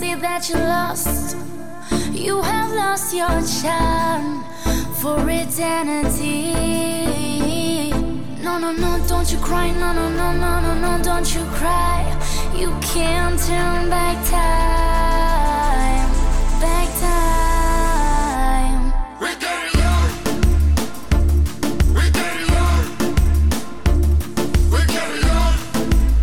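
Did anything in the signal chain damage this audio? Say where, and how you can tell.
No, nothing audible points to damage at any stage of the chain: the level holds steady with no breaks, jumps or added noise, and nothing in the sound marks a point where it was degraded.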